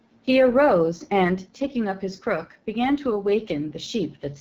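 From the start and throughout, the speech passes through the AMR wideband (HD Voice) codec at a low rate; the plainly audible roughness and rasp fit the 8.85 kbit/s mode. Above about 6.4 kHz the model substitutes shaped noise, and nothing remains above 7.2 kHz, so the top sounds synthetic and capped.

Also present for the whole clip is sample clock jitter, with the converter's sampling instants wandering by something like a microsecond or two. Timing error scales with waveform slope, adding a faint hiss, roughly 45 dB under the signal, that grows on loud, bright sounds and disappears in pauses.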